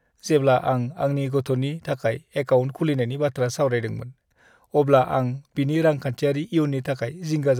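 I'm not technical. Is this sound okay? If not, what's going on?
Yes, nothing in this recording stood out as a problem when I listened to it.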